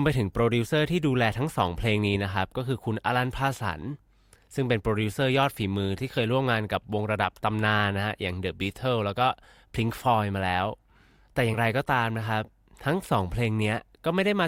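A speech recording with compressed frames skipped at 11.53 to 11.56 s. Around 40 ms of audio is missing there: the sound jumps forward rather than pausing. The size of the jump fits about two whole frames of 20 ms each, dropped because they were absent from the stream or rejected by the decoder as corrupt.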